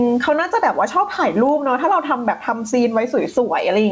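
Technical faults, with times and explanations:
Throughout, gain pumping: the gain swings by around 15 dB, squashing loud and soft parts closer in level. Likely a fast limiter reining in excessive microphone gain.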